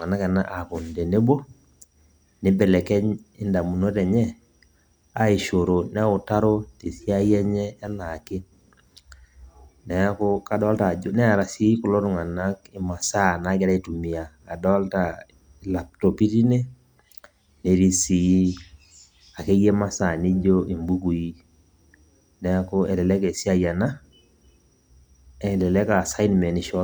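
No technical faults can be heard anywhere in this recording.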